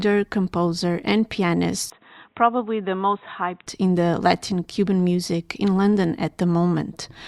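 Speech; from 1.9 to 3.67 s dull, nothing above 3.8 kHz, about 10 dB down, starting at "in the". Likely input switched to a poorer device.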